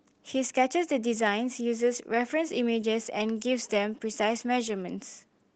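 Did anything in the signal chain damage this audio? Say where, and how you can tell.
No, nothing in the signal chain damaged this speech.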